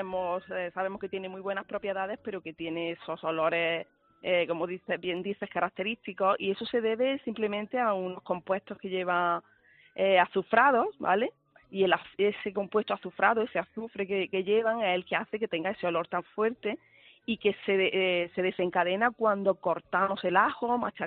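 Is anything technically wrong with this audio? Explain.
Yes. There is a single sharp click at 5.17 s. It sounds like dropped samples. The click is brief and isolated, and no sound seems to be missing around it. The likely cause is that a couple of samples went missing from the stream, a gap far shorter than a millisecond. The waveform then jumps straight from one value to a later one. That sudden step is the click. In a spectrogram it would show as a thin vertical line.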